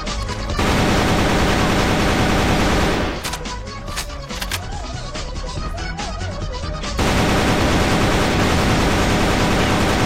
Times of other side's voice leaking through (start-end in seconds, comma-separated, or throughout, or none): none